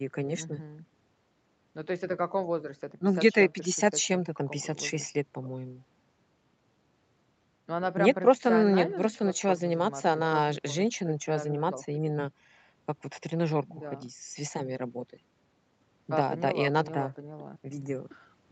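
Listening to this speech, nothing stood out as a technical fault.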